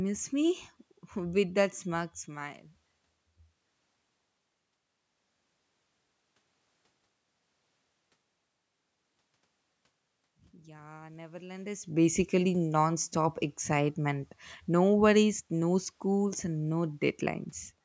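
Automatic gain rising runs from 10.51 to 12.22 s. The gain control judged the input too quiet and lifted it by about 5 dB over 1.7 s, so speech and room noise swell together, unlike the talker's own movement near 11.5 s.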